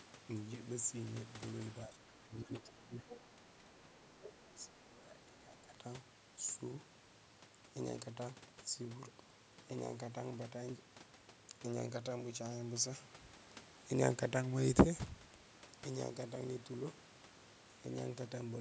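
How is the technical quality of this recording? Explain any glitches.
The recording has two related echo-cancellation faults clustered between about 1.9 and 5.8 s, where both ends of the call appear to be talking at once. The speech band tops out near 8 kHz, consistent with ordinary call microphone processing.

Speech suppressed in double talk occurs at 1.86–3.07 s, briefly at 3.36–3.42 s, and again at 3.59–5.75 s. The speech drops in level by roughly 15 dB, then about 5 dB, then as much as 20 dB, over about a second, a brief 70 ms, and about two seconds respectively. The likely cause is the echo canceller failing to separate the near talker from loudspeaker echo during overlap and attenuating both.

The other side's voice leaks through at 3.09–3.52 s, 3.73–4.01 s and 5.19–5.26 s. The first stretch is fairly prominent, around 10 dB below the main speech. The later two are faint scraps, roughly 30 dB and 35 dB down. 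This is likely residual far-end audio from the device's loudspeaker that the echo canceller did not fully remove from the microphone signal.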